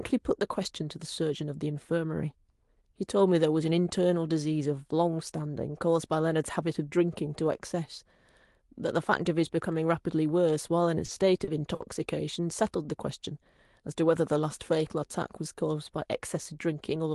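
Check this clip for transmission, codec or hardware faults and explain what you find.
There's one problem here: a short stall from a late packet, three times in quick succession, at 11.05–11.10 s, 11.44–11.49 s and 11.75–11.82 s. Each time a packet showed up late, the jitter buffer ran dry, and the receiver held the last bit of sound, about 30 ms, 30 ms and then 50 ms, until it arrived. Nothing's actually lost; you just hear a syllable drag briefly, with a faint buzzy smear, on top of the call codec's top end, which stops around 12 kHz.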